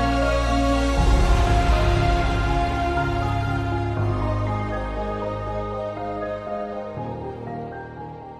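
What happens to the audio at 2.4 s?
Nothing out of the ordinary happens at 2.4 s; the audio plays through that moment intact, with no dropout, click or distortion.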